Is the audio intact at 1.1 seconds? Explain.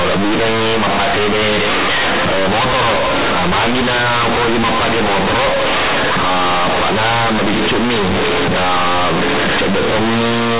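No, not at 1.1 seconds, and not anywhere else either, because the whole clip has companded audio read as linear. The A-law telephone bytes are being played as plain 8-bit samples with no expansion, so every sign change throws the output across about half its range and quiet sound comes out as loud as the peaks. You get a harsh, very loud buzzy distortion over the speech, with heavy noise filling the pauses.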